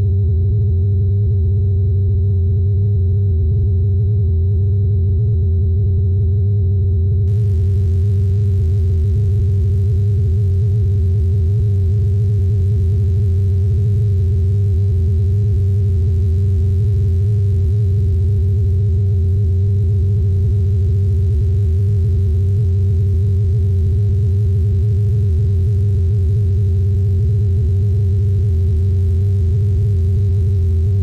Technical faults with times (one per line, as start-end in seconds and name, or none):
7.27-31.02 mains buzz